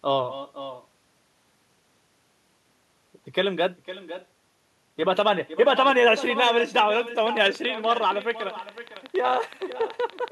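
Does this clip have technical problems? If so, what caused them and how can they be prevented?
Yes. Echo with no canceller runs throughout: a copy about 13 dB quieter returns roughly half a second late, as the far end's loudspeaker feeds its microphone unremoved. Using headphones or enabling acoustic echo cancellation at the far end prevents it.

A train of clicks runs from 7.18 to 10.29 s, about 30 regular pulses at 10.7 per second, peaking slightly above the sound, likely from nearby equipment interference or a faulty connection or power supply. Shielding cables, moving away from interfering devices, and checking connections and the power supply prevents it.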